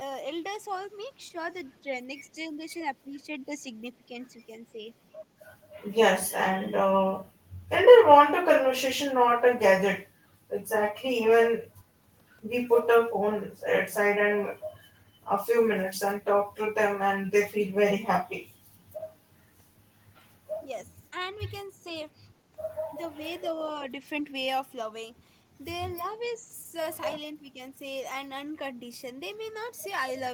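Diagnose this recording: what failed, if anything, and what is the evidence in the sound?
Speech suppressed in double talk, at the call-processing stage: level dips of about 5 to 15 dB at 1.31–4.94 s, 20.87–20.99 s, 21.68–21.85 s and 27.40–27.47 s show as notched, thinned waveform envelopes. The likely cause is an echo canceller ducking the talker while the far side speaks.

Echo leak, also in call processing: a faint copy at 23.44–23.48 s, delayed 298 ms and about 40 dB down, appears as a weak ghost trace on the spectrogram. It is likely residual loudspeaker echo that the canceller missed.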